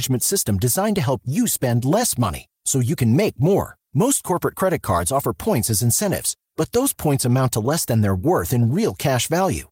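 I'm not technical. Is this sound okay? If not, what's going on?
Yes, there's nothing wrong with this recording.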